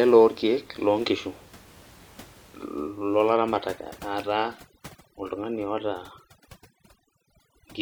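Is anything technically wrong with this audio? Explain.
Yes. Overdone noise removal starts at 3.33 s and runs to the end. The suppressor cuts bands near its noise estimate so hard that the room noise, about 25 dB below the speech, collapses into twinkling specks.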